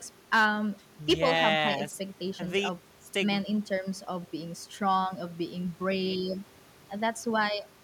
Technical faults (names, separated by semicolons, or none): hard clipping